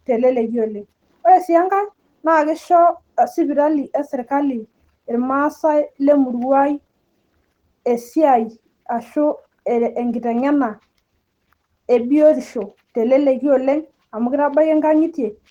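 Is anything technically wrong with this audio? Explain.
Yes. Throughout the speech there is a hoarse, slightly robotic graininess and a smeared, muffled quality, the plainly audible signature of Opus voice compression. The sound points to a low bitrate of around 16 kbps, with the linear-prediction coder handling the band up to 8 kHz and a transform layer coding the top. Coarsely quantised excitation roughens the voice. The band stays full width, with content reaching about 20.2 kHz.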